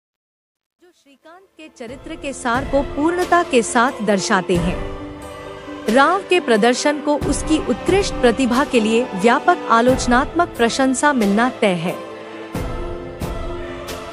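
Truncation distortion on a fade runs from 0.00 to 2.77 s, as the audio fades in from the very start. The gain stage shaping the fade discards the low-order bits without dither, and the coarseness fits a stage keeping only 11 bits. At the lowest levels the waveform collapses into a handful of square steps, so between 0.00 and 1.66 s the sound is gritty. It smooths out as the level reaches full by 2.77 s.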